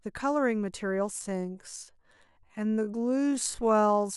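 From 1.17 s to the end, a time-stretched section slows the speech to about 0.59 speed with pitch unchanged, likely from stretching by repeating short segments, so the speech drags.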